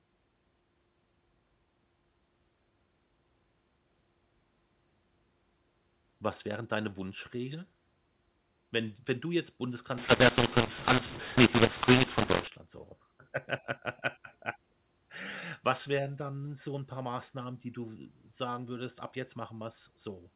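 From 9.98 to 12.48 s, right after "d wenn du jetzt", there's a mu-law and A-law mix-up: A-law telephone speech decoded as mu-law, so levels scramble, speech turns harsh, and pauses fill with noise.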